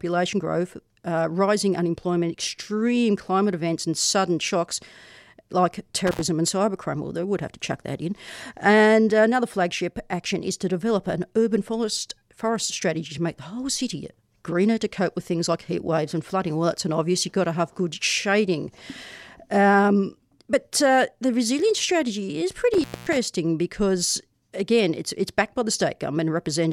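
Around 6.07 s and again at 22.74 s there's an intermittent contact, a loose cable briefly opening. The speech drops out with crackly edges for about 79 ms, then about 229 ms.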